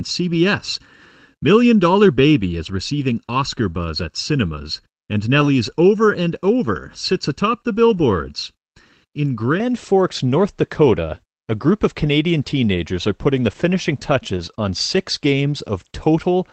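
Speech opens with a hollow, phasey colour from 0 to 9.6 s, caused by channel delay (comb filtering). One channel lags by roughly 0.7 ms, and summing to mono cuts notches starting near 700 Hz. A spectrogram shows evenly spaced dark horizontal bands that vanish after 9.6 s. At 5.41 s, 7.89 to 7.99 s and 14.37 s, lost packets rebuilt from error correction give brief rough, noisy patches without any gap, lasting 20 ms, 60 ms and 20 ms. This fits one, three and one lost packets. On a spectrogram these show as short smeared, grainy slices rather than silent holes in the waveform, all within the roughly 8 kHz band of the Opus call path.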